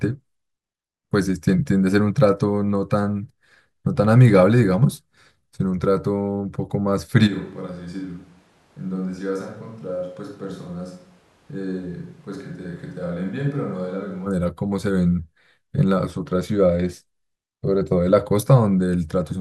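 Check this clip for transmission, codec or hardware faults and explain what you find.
One hardware-related fault is present. From 7.29 s to 14.25 s the speech turns suddenly roomy and hollow. This is a switch to a distant microphone. The close microphone's signal likely dropped out, leaving a farther pickup. Bass thins, level falls roughly 10 dB, and room noise rises to about 30 dB below the speech. The close sound returns abruptly at 14.25 s.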